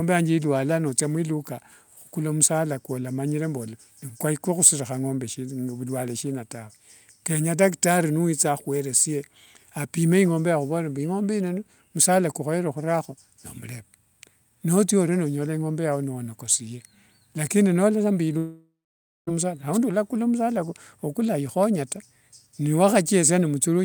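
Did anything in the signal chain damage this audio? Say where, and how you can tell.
Yes: a long network dropout from 18.37 to 19.29 s, likely lost packets. A fading buzz gives way to 0.55 s of silence, and 0.9 s of speech never returns, unlike a brief glitch.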